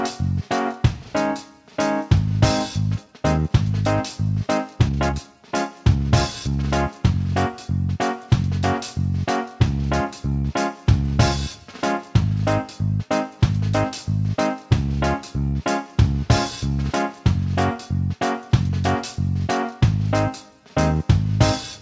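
At 2.98 to 3.00 s the playback makes a skip ahead: about a second of audio was discarded while newer audio was already queued, so the sound jumps forward with no gap and no fill. On a waveform the two sides butt together at a single seam. A spectrogram shows an abrupt change in pattern at that point, with no silence between the two sides.

Right after, from 3.03 to 3.50 s, a jitter buffer speed-up begins. The receiver held more audio than it wanted and trimmed short pitch-period pieces in quick succession, so the sound runs about 23% fast at unchanged pitch. Roughly a tenth of a second is removed. It happens again from 4.46 to 5.52 s at about 22%, removing around a fifth of a second, and from 5.95 to 6.63 s at about 11%, removing roughly a tenth. Each stretch sounds hurried. A spectrogram keeps the harmonic spacing steady while events crowd closer in time, and the waveform shows periods dropped without visible gaps. 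Throughout, the content stops at 8 kHz, consistent with a wideband call codec.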